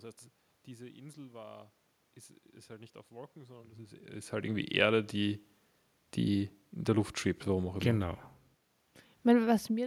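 Nothing stood out on listening; the room's own background noise and a change in level around 4 s as the talker shifts relative to the microphone belong to the recording itself.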